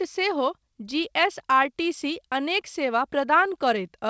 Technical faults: none

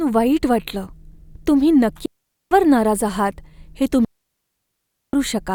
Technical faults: digital wireless dropout

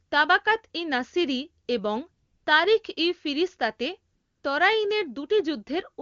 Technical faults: AMR comfort noise

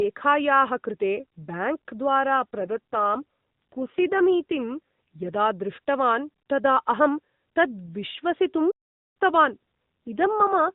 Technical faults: AMR rate drop; playback stall

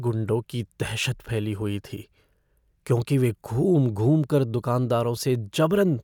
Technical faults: none

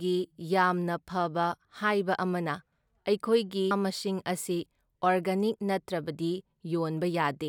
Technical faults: damaged data in a compressed stream

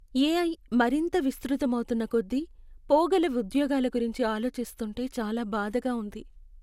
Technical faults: generation loss

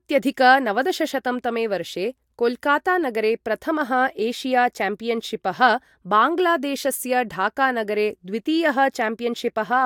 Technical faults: none

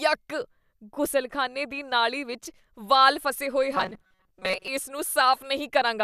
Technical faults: robotic sound from repeated short buffers

